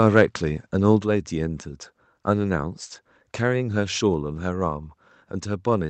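At 1.02 s the whole signal, voice and background alike, drops by about 5 dB in a single step. This is most likely the microphone volume being stepped down by the call software's input control. A waveform shows the envelope shrinking abruptly at that point, and a spectrogram shows every band dimming at once. The sound passes through the WebRTC call path, with energy ending near 8 kHz.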